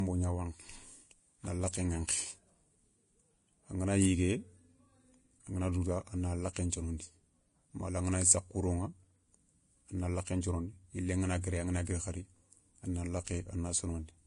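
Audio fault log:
Throughout: Vorbis compression, likely. The speech sounds hissy and grainy, with nothing above 10.6 kHz, roughened tones and blurred onsets. The encoder removed the treble and quantised the remaining detail so coarsely that it became noise, heavy damage that fits a bitrate around 31 kbps.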